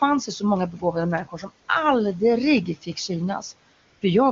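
At 0.71 to 0.95 s, 1.25 to 1.5 s and 2.75 to 3.1 s the speech is cut by the noise suppressor. In each span the suppressor misreads part of the speech as background and pulls it down with the room noise, by about 12 dB at the deepest in the first two spans and about 11 dB in the third. The gain drop covers roughly 150 to 200 ms within each span, so syllables there sound swallowed and faint before the level recovers.

From 3.73 to 4.01 s AMR comfort noise replaces the transmitted signal. The phone's voice activity detection decided the talker had gone quiet and stopped sending speech frames for 280 ms, and the receiver filled the gap with synthetic noise built from a coarse level and spectrum estimate. The real room background drops out and a smooth, steady hiss switches in, then switches back out when real frames resume.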